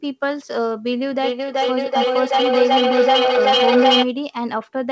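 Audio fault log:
1.15–4.14 s, feedback howl: a tone around 500 Hz swells until it peaks about 4 dB above the speech, the loop repeating roughly every 400 ms as sound travels from loudspeaker to microphone, gaining level each trip. A spectrogram shows a bright horizontal band; the waveform shows a growing envelope.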